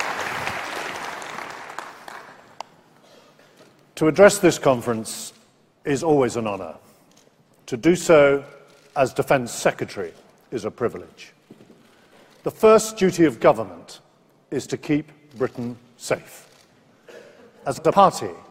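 Frames out of order near the end of the audio, from 17.77 to 17.92 s: two adjacent blocks of about 70 ms each were decoded in swapped order, so the later slice plays before the earlier one. The sound turns into a brief garbled flutter. The block length fits runs of three coded frames. Nothing is dropped; the overall duration stays intact.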